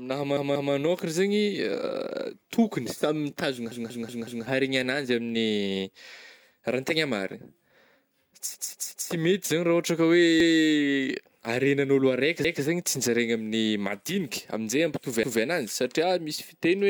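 Six times, new audio failed to reach the playback device in time, so it replayed its last buffer. This repeated buffer fault makes a fragment of speech about 186 ms long, which fits an 8192-sample buffer, sound again with a hard join. It repeats twice extra at 0.37 s, four times at 3.72 s after "tokogny samy mitazogna", three times at 8.55 s, and once each at 10.40 s, 12.45 s (before "zany tsinjaraigna") and 15.23 s. Each is heard as a short stutter.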